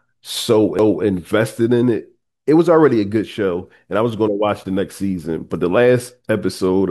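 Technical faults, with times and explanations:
0.78 s, CD skip: a brief tick cuts into the speech, with a near-silent gap of only a few milliseconds, and the sound then resumes from a different point, so the flow of speech breaks abruptly rather than continuing smoothly. A knock or a flaw on the disc surface made the player's laser lose its track and land on another turn of the spiral; the player muted briefly while it relocked, then carried on from the new position.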